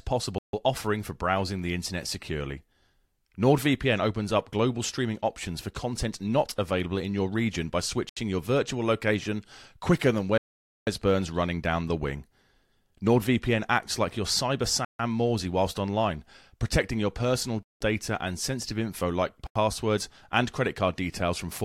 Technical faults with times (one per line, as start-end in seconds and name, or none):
0.38-0.53 Bluetooth stall
8.09-8.17 Bluetooth stall
10.38-10.87 Bluetooth stall
14.85-14.99 Bluetooth stall
17.63-17.81 Bluetooth stall
19.47-19.56 Bluetooth stall